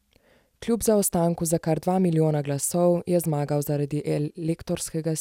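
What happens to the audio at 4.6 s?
Nothing goes wrong at 4.6 s; the speech carries on intact through that moment.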